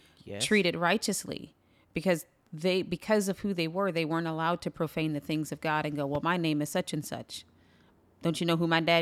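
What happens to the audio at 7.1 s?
Nothing goes wrong at 7.1 s; the speech carries on intact through that moment, with no dropout, click or distortion to be heard.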